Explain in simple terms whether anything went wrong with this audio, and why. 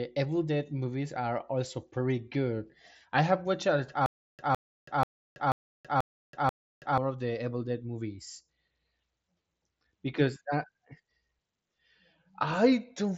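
From 4.06 to 6.98 s, the same short blip of speech, about 0.16 s long, repeats six times, each followed by about a third of a second of dead silence, just before "of the". This stutter with silent gaps likely comes from playback stalling and replaying its last fragment. The speech meant for that stretch is lost.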